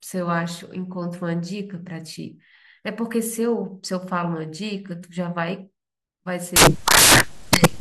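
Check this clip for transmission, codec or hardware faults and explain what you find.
One fault is present. From 6.56 s to the end at 7.80 s, the speech turns into samples built from the wrong bytes. The reader assembles each sample with its bytes misaligned or in the wrong order. The rapidly changing low-order bits end up as the most significant part of each value. The result is loud, harsh broadband noise that replaces the speech.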